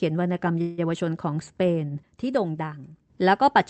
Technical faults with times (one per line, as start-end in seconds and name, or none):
0.61-0.80 call audio freeze